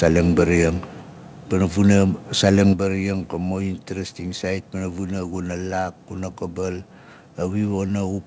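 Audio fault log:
1.02 s and 2.73 s, microphone volume stepped down: software likely lowered input gain in single steps of about 4 dB, then about 6 dB, so the speech and background abruptly drop in level.
1.90–1.95 s and 2.44–2.62 s, microphone overload: input volume likely set too high, so peaks pushed about 1 dB, then about 2 dB past the converter's limit, flattening their tops and adding a harsh, crackling edge.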